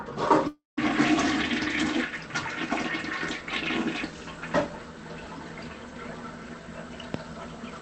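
From 0.47 to 0.79 s the sound smears into a buzzy, hissing continuation of itself that fades out and leaves a short stretch of silence before the audio resumes, with about 0.3 s of material simply gone. This is likely a long network dropout. No packets arrived for that stretch, so the receiver kept extending the last sound until it ran out and went quiet. The call path's top end is cut off around 8 kHz.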